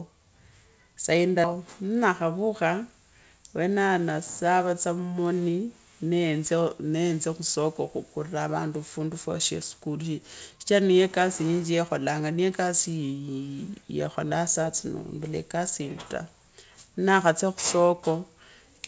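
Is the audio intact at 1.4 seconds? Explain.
No, there's a skip ahead at 1.44 to 1.46 s. Roughly 0.4 s of speech got dropped, likely because the jitter buffer overflowed and discarded audio while newer audio was already queued. Playback jumps forward, and the two sides butt together with no gap.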